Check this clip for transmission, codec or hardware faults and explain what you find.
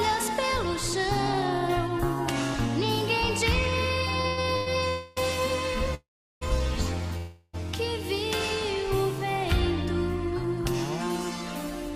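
Four network-delay faults appear between 4.2 and 7.6 s. Nothing is lost, but the sound is held up repeatedly.

From 4.21 to 4.68 s there are repeated stalls (stutter). The sound drags and hiccups through four short holds, the longest about 98 ms, which fill half that span. Packets arrived late, so the jitter buffer kept running dry and the last sound was stretched.

A call audio freeze occurs at 4.88 to 5.18 s, 5.94 to 6.43 s and 7.17 to 7.55 s. The sound stops on a held, fading buzz, and in the middle freeze it drops to about 0.36 s of silence. The audio then resumes where it left off, each time about 0.28, 0.47 and 0.36 s late. The likely cause is packets held up in transit.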